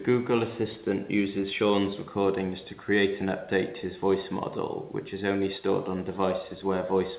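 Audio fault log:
No faults heard.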